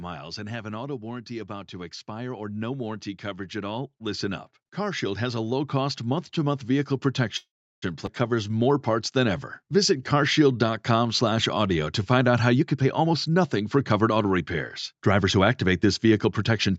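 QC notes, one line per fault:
0.05–1.3 s, automatic gain falling: the level starts high and eases down by about 3 dB over just over a second, with the background sinking at the same rate. The gain control judged the input too loud. The slow, even glide is what separates it from a sudden fader drop.
1.27–6.97 s, automatic gain rising: speech and background swell together by about 11 dB across nearly six seconds as the gain control lifts an input it found too quiet. Because the noise floor climbs with the speech, this is a gain change, not the talker getting louder.
7.37–7.84 s, call audio freeze: the sound hangs as a fading buzz and then goes silent for about 0.34 s. Playback resumes where it stopped, so about 0.45 s has been inserted and nothing is lost. This likely comes from packets held up long enough to empty the jitter buffer. Unlike a skip, the audio continues from the same point.
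8.06–8.09 s, skip ahead: playback jumps forward almost without a gap, and roughly 0.3 s of speech is missing. The two sides are butted together. A dropped stretch of audio was discarded while later audio was already waiting. The tell is the missing material, not an added pause.
8.36–12.04 s, jitter buffer slow-down: speech runs at 93% speed with unchanged pitch, and sounds are drawn out by about 258 ms in total. Repeated pitch periods rebuilt a depleted buffer. Pitch stays put, which rules out a tape-style slowdown.
12.55–14.41 s and 14.92–16.69 s, jitter buffer speed-up: speech hurries at 115% and then 106% with pitch unchanged. Roughly 0.3 s and then 0.1 s are trimmed out in short pitch-period cuts to shed excess buffered delay. The mirror of the slow-down, it sounds rushed rather than stretched.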